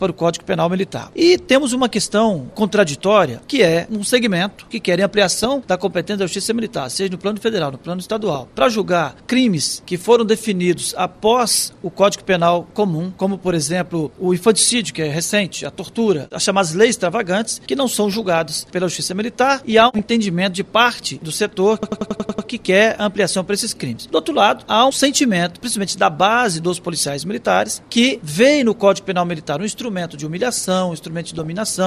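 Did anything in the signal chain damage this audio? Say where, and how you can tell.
Yes. At the codec stage, the whole clip sounds dull and gurgly, with flickering upper bands. That is likely MP2 compression, consistent with an 80 kbps stream.

Over the broadcast link, DAB burbling comes from bit errors slipping past error correction and corrupting sub-bands. Short blips of noise in single sub-bands appear at 5.25–5.46, 8.20–8.40, 15.18–15.39, 18.11–18.48, 19.72–20.01 and 31.25–31.47 s.

At the driver or buffer stage, a system hang loop replays one 93 ms chunk seven times. This creates a 10.8 Hz stutter from 21.83 to 22.48 s, which fits a 4096-sample buffer.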